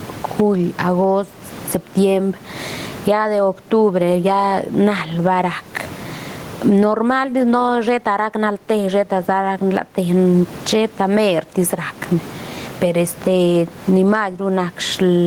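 Input gain is likely set far too high, so a fast limiter clamps down on every loud syllable, causing gain pumping throughout. With swings of roughly 25 dB, the speech sounds squashed, and the room noise sits about 35 dB below the speech.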